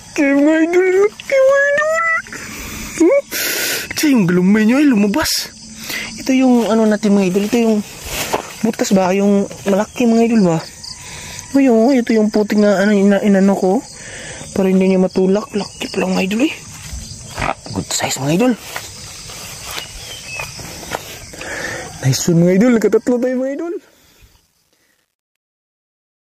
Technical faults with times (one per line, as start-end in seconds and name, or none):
22.97-26.32 truncation distortion on a fade